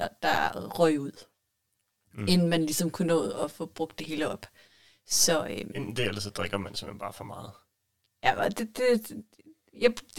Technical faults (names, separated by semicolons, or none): channel delay (comb filtering)